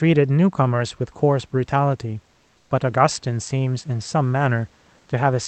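From 2.57 to 2.69 s, a gap of about 120 ms, the faint room background of this speech clip, sitting roughly 41 dB under the talker, gives way to a smooth, featureless hiss about 2 dB quieter. That is comfort noise in place of the background. The likely cause is Opus discontinuous transmission. During the pause the sender stopped coding the real ambience, and the receiver filled the space with synthetic noise, losing the room's detail until speech resumed over the call's 8 kHz band.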